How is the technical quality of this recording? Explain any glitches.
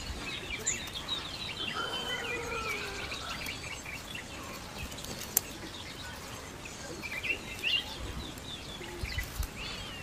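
Nothing glitches anywhere in the recording, so there's nothing to explain and it holds up fine from a technical standpoint.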